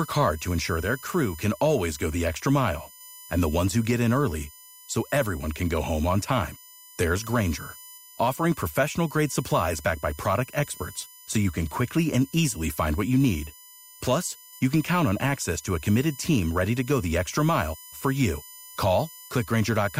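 USB whine runs through the whole speech clip. It is a fixed tone at 1 kHz. Its strongest harmonic sits at 23 kHz. It lies roughly 20 dB below the speech. The bus's 1 ms current frames leak in through power or ground.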